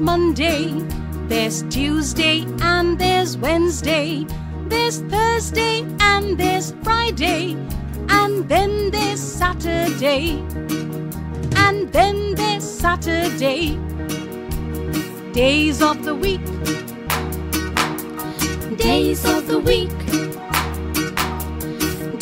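No technical faults can be heard anywhere in the audio, with the signal holding steady and continuous throughout.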